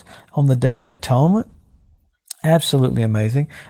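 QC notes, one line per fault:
0.65–1.01 s, long network dropout: right after "on the" the sound smears into a buzzy, fading continuation for about 0.34 s without dropping to silence. It then resumes further on with that stretch gone, likely because packets stopped arriving and the receiver concealed the gap.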